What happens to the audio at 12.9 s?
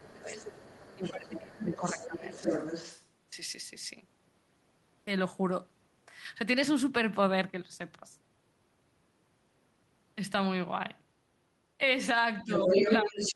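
A second voice from the far side sits over the talker from 12.39 s to the end, about 5 dB louder than the talker; this is likely the other side's voice leaking through, with loudspeaker echo left uncancelled in the microphone. From 12.43 to 13.19 s the talker's own voice dips by up to around 10 dB in patches totalling about 0.4 s. That points to speech suppressed in double talk, likely the echo canceller turning down both its own talker and the loudspeaker echo while both sides talk at once.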